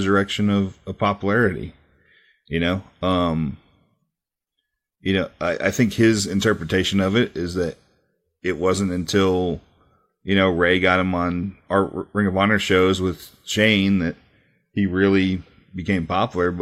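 Nothing in the speech stood out as a technical fault on listening.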